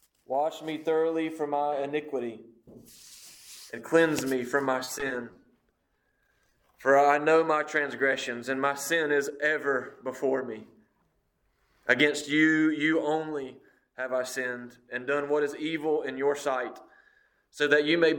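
From 4.84 to 6.69 s there's repeated packet loss: dozens of short holes, up to 30 ms each, patched by stretching prior sound, giving a choppy, robotic texture.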